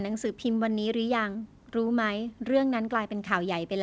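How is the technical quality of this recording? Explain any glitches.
The technical quality is sound, with no glitches to explain in this speech heard through a call codec that carries nothing above 8 kHz.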